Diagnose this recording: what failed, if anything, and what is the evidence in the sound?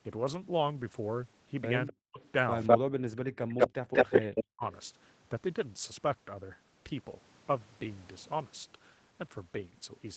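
Echo leak, in call processing. A delayed copy of the speech, about 0.2 s behind, is heard from 1.87 to 2.78 s and 3.5 to 4.43 s. Likely residual loudspeaker echo the canceller missed.

Speech suppressed in double talk, also call processing. The speech drops by about 40 dB at 1.9 to 2.21 s, 2.9 to 3.7 s and 4.04 to 4.63 s. The canceller likely attenuated the talker during overlap.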